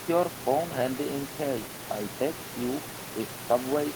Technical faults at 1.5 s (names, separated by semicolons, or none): none